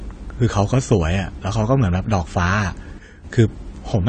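From start to finish the speech carries plainly audible AAC compression damage. Nothing is heard above 9 kHz. Sibilants sound dull and smeared, with a fizzy, warbling texture. The likely cause is AAC-LC coding at a low rate, which fits about 32 kbps.

At 2.99 s a sudden gain jump drops the level by about 9 dB in one step. Speech and background noise fall together, with no fade. At 3.24 s the level snaps back. This is likely a gain change applied without a ramp.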